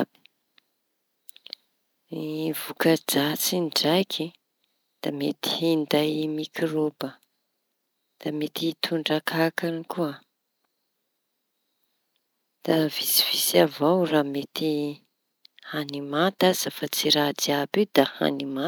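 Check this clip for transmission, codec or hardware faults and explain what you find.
No transmission, codec or hardware faults are audible in this speech recording.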